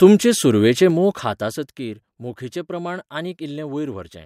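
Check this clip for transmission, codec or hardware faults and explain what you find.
One fault: zipper noise from 0.8 to 2.0 s. The speech level drops by about 10 dB in unsmoothed steps of about 2 dB, roughly five per second. Each step clicks, giving a ticking zipper.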